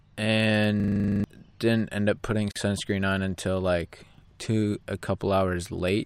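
A system hang loop runs from 0.8 to 1.24 s, just before "didn't end up putting". The playback system froze while the hardware kept replaying its ring buffer, so a 40 ms scrap of speech repeats 11 times as a rattling 25 Hz buzz, and about 0.4 s of audio is lost.

A gap at a join of encoded pieces follows at 2.51 to 2.56 s, between "didn't end up putting" and "sunscreen on until like". Separately encoded segments were spliced without trimming encoder delay and end padding, leaving a 43 ms hole with smeared edges before the speech resumes.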